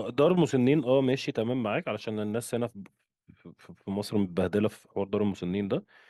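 No technical faults can be heard anywhere in the speech recording.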